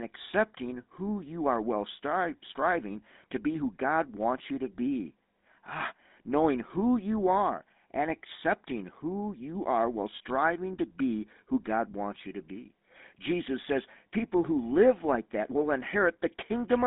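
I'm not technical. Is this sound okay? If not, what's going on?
No. The speech has been through the GSM full-rate codec, the coding used by early mobile phones, and it affects the whole clip. That codec rebuilds the voice from a simple model of the throat and mouth, driven by a coarse pulse pattern, which gives the plainly audible buzzy, gravelly roughness you hear. It also behaves like a phone line: very low tones below 200 Hz are thin, and nothing above about 3.8 kHz gets through, so the speech sounds muffled.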